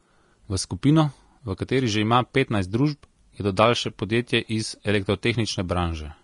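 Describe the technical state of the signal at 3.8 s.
At 3.8 s the speech carries the Vorbis compression damage present across the whole clip: nothing above about 10.6 kHz, and coarsely quantised treble turned into grainy hiss with softened consonant attacks, likely from a low-rate Vorbis encode consistent with roughly 35 kbps.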